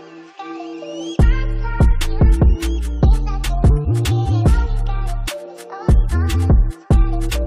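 No dropouts, clipping, glitches or other technical faults can be heard anywhere in the recording.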